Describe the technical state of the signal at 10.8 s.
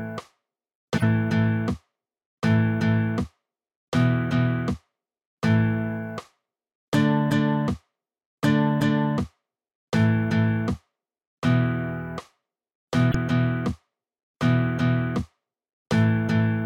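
A corrupt frame decoded runs from 10.73 to 10.77 s. Flipped bits push energy to wrong frequencies for about two frames, giving a chirp, squeak, blip or burst of noise peaking near -30 dBFS.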